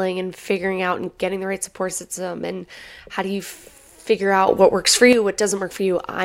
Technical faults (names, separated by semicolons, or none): sudden gain jump